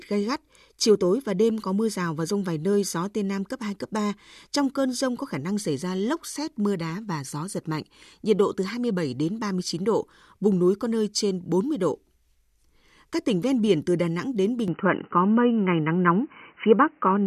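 From 14.68 s to the end, the speech abruptly turns dull and boxy, with nothing above 3 kHz. The level shifts by around 5 dB and a faint new background noise appears, roughly 45 dB below the speech. The change happens with no gap at the switch. This is most likely an input switched to a poorer device: recording jumped mid-take to a narrower-band microphone or headset path with its own tone, gain and noise floor.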